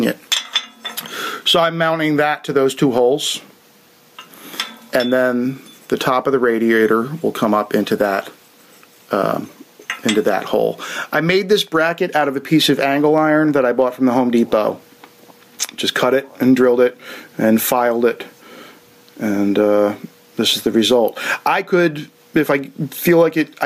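Gain pumping runs through the whole clip, with a level swing of roughly 15 dB. The likely cause is input gain set far too high, with a fast limiter or compressor clamping down on each peak. On a waveform the envelope looks flattened, peaks and quiet stretches pressed together.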